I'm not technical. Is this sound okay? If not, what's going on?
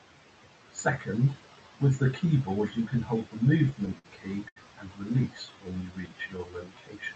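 No, there are three problems, all from pieces of the speech arriving late over the network connection.

From 3.49 to 4.06 s there are repeated stalls (stutter). The pieces of audio kept turning up late, so the player ran out of sound six times in that half second. Each time it kept the last sound going until more arrived, about a tenth of a second in total, the longest wait just under 60 milliseconds. Nothing is lost, but the speech catches and drags there.

From 4.48 to 4.58 s there is a short stall from a late packet. A single piece of audio wasn't there when it was needed. The player held the sound it was on for about 80 milliseconds, then carried on exactly where it had stopped. You hear one sound stretched out too long, perhaps with a faint buzz or dip in it.

From 5.34 to 6.83 s there is a jitter buffer slow-down. The player's small reserve of waiting audio had run low, or it had just decided to keep a bigger reserve, so it built it up by repeating tiny slices of the sound over and over. 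That adds about a fifth of a second, and the speech plays at roughly 86% of normal speed without dropping in pitch. It sounds slightly drawn out and can waver a little.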